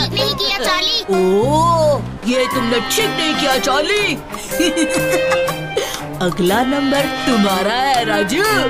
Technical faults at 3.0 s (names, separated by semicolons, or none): dropped buffer (overrun)